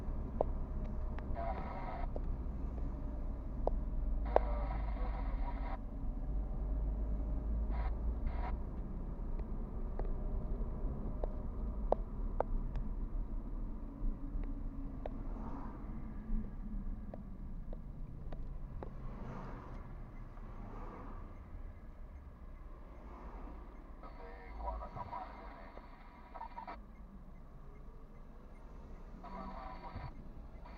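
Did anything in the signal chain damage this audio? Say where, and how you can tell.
Yes. At 7.70 s there is a skip ahead at the network or jitter-buffer stage: playback jumps forward with no gap, and roughly a fifth of a second of audio is missing. The stretch was discarded while later audio was already queued, so the two sides join almost directly.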